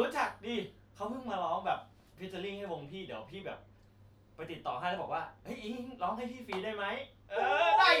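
Speech, with no technical faults to be heard.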